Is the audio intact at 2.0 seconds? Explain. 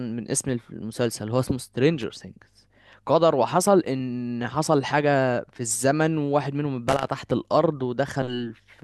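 No. At 2.01 s a brief loose connector crackle breaks into the speech. It lasts until about 2.03 s, under 30 ms in all. A worn or dirty contact in the signal path is losing and regaining connection as it shifts. Each break chops the signal off and back on. Any DC sitting on the line turns those breaks into pops. The result is a short, ragged scratch of crackle laid over the speech.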